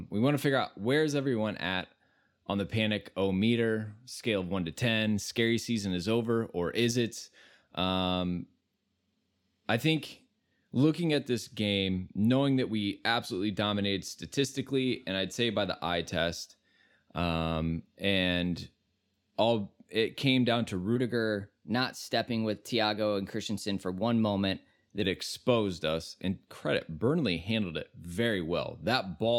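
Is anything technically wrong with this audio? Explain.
Yes. Wrong sample rate, from 20.96 to 25.02 s: for this stretch the samples are read out faster than they were captured, with no rate conversion in between, so timing and pitch shift together. The speech runs about 1.09 times too fast and sits roughly 1.47 semitones high, which fits 44.1 kHz material being played at 48 kHz. The result sounds hurried and slightly chipmunk-like, then snaps back to normal pace.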